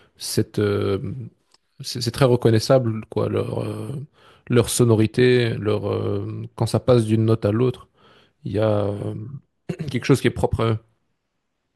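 From 2.08 s to 10.92 s the speech carries about four regular clicks spaced 2.94 s apart, most likely clock drift buffer slips: two clocks differing by around 50 ppm force a handful of samples to be dropped or repeated. Each shows as a thin vertical broadband line on a spectrogram and a small step in the waveform.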